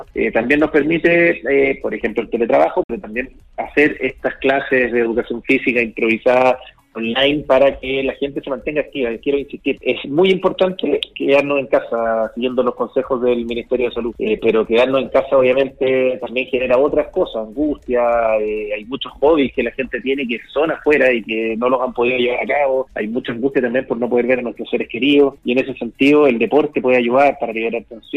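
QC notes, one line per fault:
2.83–2.90 s, Bluetooth dropout: packets likely reached the headphones too late and were dropped, leaving a 56 ms silence before the sound resumes further along.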